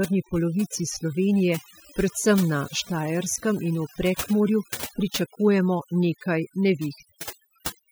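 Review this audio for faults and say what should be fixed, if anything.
Overdone noise removal runs through the whole speech clip. The noise reducer was set too aggressively, so narrow frequency bands near its noise estimate are pulled down or switched off, and the softer parts of the voice go with them. Pauses drop to near silence dotted with twinkling specks. On a spectrogram, the background shows as empty regions scattered with isolated bright dots, and the voice's harmonics look patchy. To prevent this, use a gentler reduction setting and keep some of the background noise.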